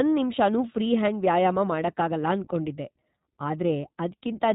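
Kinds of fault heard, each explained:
iLBC codec: the speech stops above 4 kHz and sounds plainly rough and synthetic, pointing to iLBC coding each 20 ms frame independently.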